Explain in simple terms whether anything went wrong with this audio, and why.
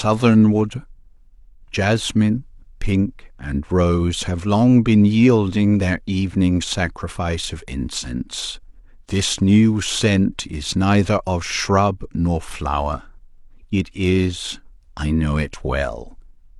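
Nothing went wrong here.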